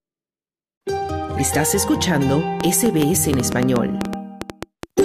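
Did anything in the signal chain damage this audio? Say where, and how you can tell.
Yes. Interference, likely from nearby equipment coupling into the analogue wiring or a faulty connection, injects a train of clicks from 2.6 s to 5.0 s: about fifteen similar pulses, unevenly spaced at roughly 6.3 per second, popping about 15 dB above the sound.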